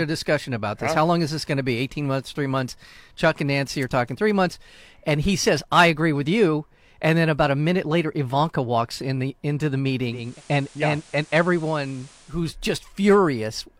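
From 10.03 to 12.53 s the speech shows digital radio blending to analogue: a 384 ms crossfade to FM, hiss about 25 dB below the speech, level unchanged.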